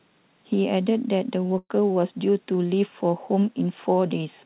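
At 1.58 s a burst of packet loss breaks the speech until about 1.71 s. The receiver stretches the last sound for about 110 ms, fading it down, then leaves about 30 ms of silence before speech resumes with roughly 120 ms missing.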